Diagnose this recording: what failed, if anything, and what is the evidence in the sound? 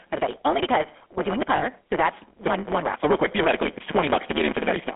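Block size mismatch (truncated), throughout, at the driver or buffer stage: a steady buzz at 150 Hz runs under the speech, and the talk moves 1.6 times too fast at roughly normal pitch. One stage writes longer blocks, which fits a 512-sample write, than the next reads, and each block's tail is discarded.

GSM full-rate codec, throughout, at the codec stage: the speech sounds plainly buzzy and gravelly and is confined to about 200 Hz to 3.4 kHz, which fits 13 kbit/s GSM full rate. The codec models the vocal tract and drives it with sparse regular pulses, so fine detail turns rough.

Lost GSM frames, 1.56 to 1.65 s, just after "because we're doing the", at the network stage: a 60 ms metallic, rough ring, which fits about three lost frames. The decoder held the last good frame's settings and repeated them instead of passing real audio.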